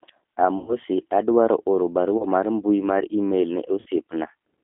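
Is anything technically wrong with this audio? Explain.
Yes. The speech runs through a G.729 codec for its whole length, and there are three dropouts from VoIP packet loss concealed by the speech codec.

The codec damage is plainly audible. The band is squeezed to about 200 Hz to 3.5 kHz, so the speech sounds narrow and phone-like. This coder models the vocal tract with a filter and rebuilds the excitation from a pitch predictor and a few pulses. That gives the speech a rough, slightly synthetic texture, which fits an 8 kbit/s coder.

The losses fall at 0.58 to 0.77 s, 2.18 to 2.25 s and 3.80 to 3.88 s. They cover about 100 ms, 20 ms and 60 ms of missing audio. That likely matches five, one and three lost 20 ms packets. In each gap the decoder repeats its last pitch and filter while lowering the gain. The sound smears into a buzzy tone or a coloured noise that fades. Because each frame builds on the one before, the speech stays weak and distorted briefly after each gap.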